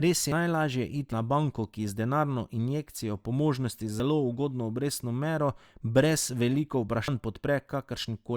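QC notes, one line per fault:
0.32 s, dropped buffer (overrun): likely the samples weren't collected before the hardware overwrote them. Roughly a tenth of a second vanishes, so the speech jumps ahead.
1.12 s, dropped buffer (overrun): likely samples overwritten before they were read. About a tenth of a second is lost just before "na banko ki z", splicing the speech together.
4.0 s, dropped buffer (overrun): likely a shorter missed read. A few tens of milliseconds disappear, and the two sides of the speech join directly.
7.08 s, dropped buffer (overrun): likely samples overwritten before collection. About a tenth of a second is skipped with no silence, so the speech lurches forward.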